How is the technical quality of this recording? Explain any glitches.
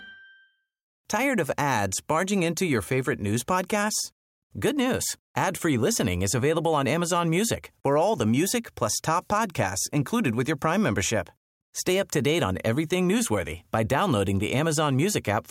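The technical quality of the recording is good, and there are no glitches to explain.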